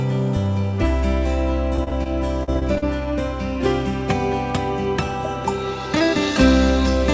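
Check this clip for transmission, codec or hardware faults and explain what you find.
Two bursts of repeated packet loss (robotic sound) are audible, within a band that stops at 8 kHz, consistent with a G.722 wideband call path. From 1.76 to 2.07 s and from 2.43 to 2.84 s, packets went missing in quick succession. Each gap, the longest 30 ms and 39 ms respectively, was patched by extending the preceding sound, covering roughly 30% of each stretch. The result is choppy audio with brief pieces dropped out.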